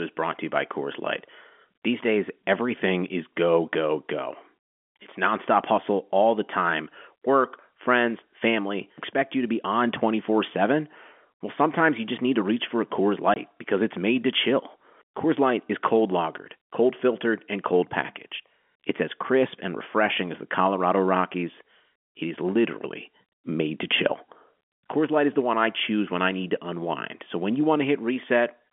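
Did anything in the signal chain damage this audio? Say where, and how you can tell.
Yes. At 13.34 s, just before "because it's made to", a 20 ms hole of silence with hard edges, which fits one lost network packet: packet loss filled with silence.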